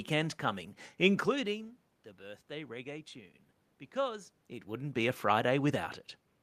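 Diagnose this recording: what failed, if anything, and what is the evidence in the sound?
Nothing in the signal chain has failed; the speech arrives intact through every stage. What can be heard is the room's own background noise and the talker's level shifting at the microphone around 1 s and again near 4.5 s, as a person moving closer or leaning back would cause.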